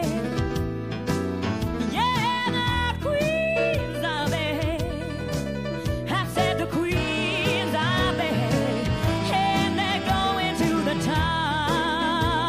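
At 8.63 s a single sharp click is heard, likely from dropped samples, about one sample lost, making the waveform jump abruptly, seen as a thin vertical spectrogram line.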